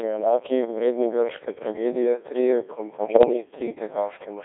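Throughout, a Codec 2 vocoder rebuilds the speech from sine waves at a rate that fits about 1.6 kbit/s, giving buzzy, robotic speech. The spectrogram shows smeared harmonics between 300 Hz and 3.6 kHz.

From 2.97 to 3.33 s, just after "vredni grške tragedije trije", bit errors on digital voice radio, at around one bit in twenty, scramble frame parameters. Warbling bleeps appear, with blocky jumps in pitch and level.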